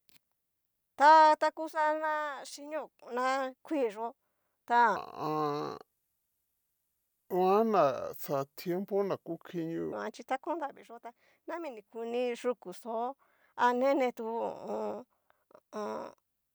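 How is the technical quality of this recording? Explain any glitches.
The recording has one clear glitch. From 4.96 s to 9.92 s there is a section at the wrong speed. The speech plays at about 0.73 times its proper rate. Because speed and pitch are tied together, the voice also drops, by roughly five semitones. It sounds deep, slow and dragging, then snaps back to normal at 9.92 s. The likely cause is that this stretch was played against the wrong clock, slower than the one it was recorded with.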